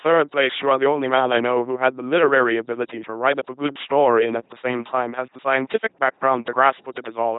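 The whole speech clip carries heavy LPC-10 vocoder damage. Pulses or hiss drive a simple filter, so it buzzes robotically. Nothing sounds above 3.9 kHz.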